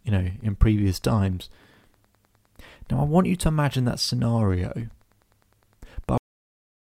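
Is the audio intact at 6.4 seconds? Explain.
No. From 6.18 s to 6.81 s this is a cut-off end: the final buffers were never written or played, so the speech stops abruptly mid-sound at 6.18 s and falls straight to digital silence with no natural decay. At 6.4 s there is nothing.

Underneath the speech up to that point, Wi-Fi interference is present. A nearby radio's beacon, repeating every 102.4 ms, is rectified by the audio circuit and heard as a faint, steady ticking about ten times a second, roughly 45 dB below the speech.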